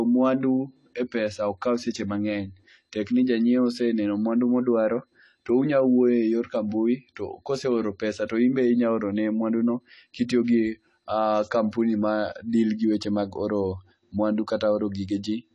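Throughout the speech, the audio was likely squeezed through AAC compression at a low bitrate, which fits AAC-LC at around 32 kbps. Nothing survives above 11.5 kHz, so the speech sounds dull and smeared, with a clearly audible warbling, fizzy texture on sibilants and held sounds.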